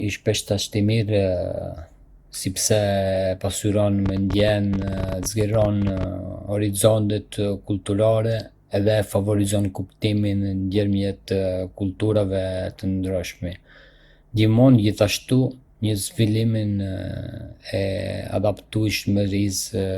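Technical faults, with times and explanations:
throughout: generation loss, speech sounds swirly, smeared and hollow with blurred attacks, likely from several rounds of re-encoding, which fits Opus at around 64 kbit/s.
4.06 to 6.04 s: train of clicks, about fourteen uneven ticks per second, around thirty in all, poking about 5 dB above the speech, likely interference or a faulty connection or power supply.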